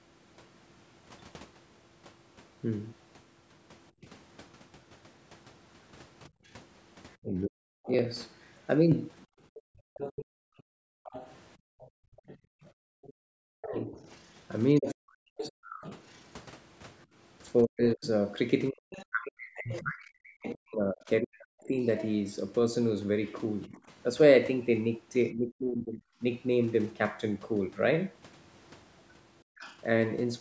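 At 4.02 to 4.06 s the speech dips by roughly 10 dB for a brief moment, likely speech suppressed in double talk, with the echo canceller ducking the talker while the far end was also active. From 6.29 to 13.25 s the room sound drops away in patches, about 1.5 s in total and down by about 40 dB at worst. This is background gated by the echo canceller, which clamps the microphone while the loudspeaker plays. A faint second voice runs underneath from 6.46 to 21.67 s, around 15 dB below the talker. This is likely the other side's voice leaking through, the canceller failing to strip the loudspeaker signal from the microphone. Between 7.21 and 26.22 s the talker's speech is repeatedly pulled down or cut into pieces, roughly five seconds altogether and as much as about 40 dB at the deepest, the likely mark of speech suppressed in double talk as both sides speak at once. At 29.43 to 29.59 s the background gates out again by about 38 dB, and from 29.59 to 29.78 s a short scrap of what is likely the far voice leaks through at roughly 20 dB below the speech. 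The call's microphone processing runs as expected, with no content above 8 kHz.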